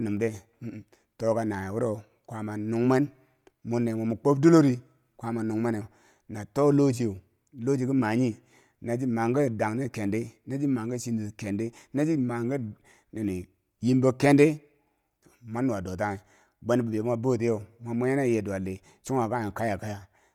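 Throughout the speech, the upper range has a breathy, grainy edge. The likely cause is Bluetooth LC3 compression. This transform codec codes 10 ms frames. The damage fits a bitrate near 48 kbps, where sparse upper detail gets filled with noise. Nothing sounds above 20.2 kHz.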